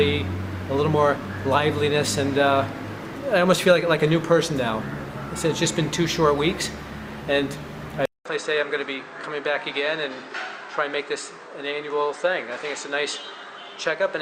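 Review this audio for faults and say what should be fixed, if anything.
At 8.05 s the recording chain likely switched its input to a poorer device, and that device stays in use to the end. The changeover leaves a gap of about 200 ms, after which the audio is band-limited with nothing above 8.8 kHz, so it turns dull and boxy. It also drops roughly 5 dB in level and brings a faint new background noise of its own, sitting far below the signal. To prevent this, lock the recording to a fixed input device and disable automatic device switching during capture.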